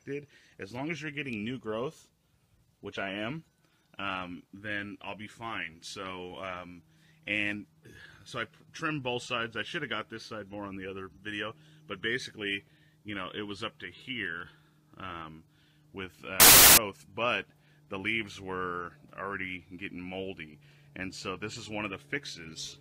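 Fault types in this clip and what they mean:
Samples built from the wrong bytes: The reader assembles each sample's bytes in the wrong order or alignment. The rapidly changing low bits then dominate every value. From 16.40 to 16.77 s, the sound turns into a burst of loud, harsh broadband noise.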